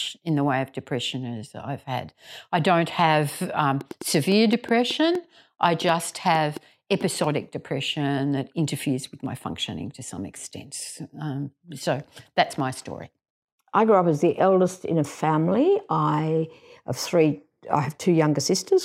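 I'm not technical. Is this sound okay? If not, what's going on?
No. A train of clicks runs from 3.81 to 7.25 s, between "had I don't have" and "depression that interferes with": about fifteen similar pops at an uneven pace, likely interference from nearby equipment.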